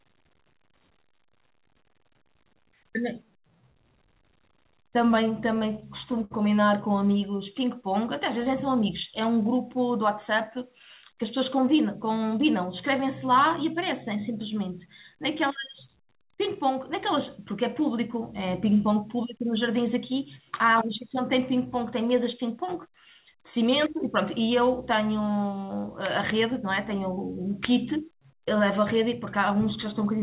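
From 5.46 to 6.69 s the speech catches and drags in a series of small hitches, about ten in all, each a brief smear where a sound hangs on instead of moving forward. These are repeated stalls (stutter). Packets reached the receiver late, so its jitter buffer kept running dry. Each time, the receiver stretched the last sound to cover the wait, the longest for 60 ms and 155 ms in total. Nothing is lost; the speech is only held back.

Later the speech sounds slightly rushed in three places while its pitch stays put: 22.48 to 22.93 s at about 106% speed, 26.32 to 27.53 s at about 105%, and 29.15 to 30.19 s at about 105%. This is jitter buffer speed-up. The buffer had built up more delay than it wanted, so the receiver trimmed many tiny pitch-period slices to catch up. It removed roughly 40, 70 and 50 ms across those stretches. Throughout, the call path leaves nothing above 4 kHz, which fits G.711 A-law telephone coding.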